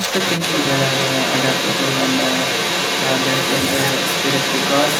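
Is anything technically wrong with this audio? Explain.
Yes. Throughout, from 0.0 to 4.99 s, there is the other side's voice leaking through, likely because the echo canceller failed to strip the far end's loudspeaker playback from the microphone. That second voice sits at roughly the same level as the main speech, competing with it.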